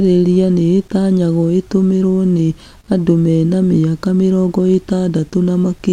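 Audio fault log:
No faults heard in this speech recording.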